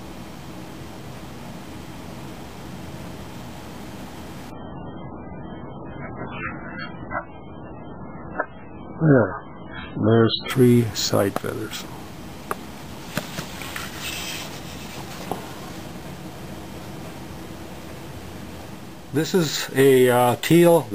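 At 4.50 s the sound suddenly gets much rougher and stays that way until 10.50 s. That's an adaptive stream dropping to a lower bitrate: the connection slowed, so the player swapped to a cheaper version without any gap. For those six seconds nothing survives above 4.4 kHz and the codec artefacts climb, which fits a step down from roughly 128 kbit/s MP3 to something near 8 kbit/s. At 10.50 s the quality snaps straight back.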